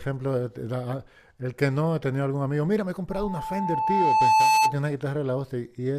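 A speech recording in which, from 3.10 to 4.76 s, a pure tone near 874 Hz swells over roughly a second and a half to about 10 dB above the speech. This is loudspeaker feedback squeal: the microphone hears its own loudspeaker, and loop gain exceeds unity at that frequency.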